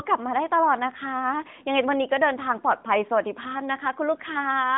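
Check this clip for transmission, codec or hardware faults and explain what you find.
No transmission, codec or hardware faults.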